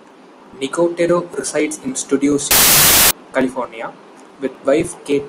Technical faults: wrong sample width

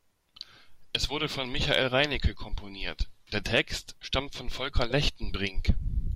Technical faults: none

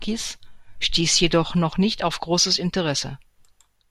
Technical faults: dropped samples

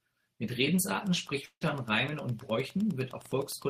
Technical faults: Wi-Fi interference; long network dropout

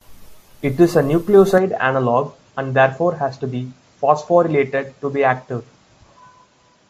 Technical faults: input switched to a poorer device

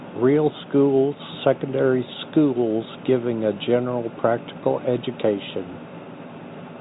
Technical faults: none

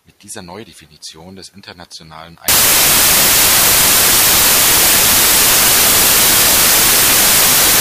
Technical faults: samples built from the wrong bytes

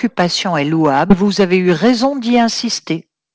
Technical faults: skip ahead; jitter buffer speed-up

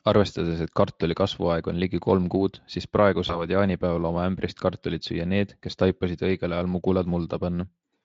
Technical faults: VoIP packet loss concealed by the speech codec

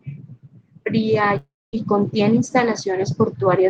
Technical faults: long network dropout

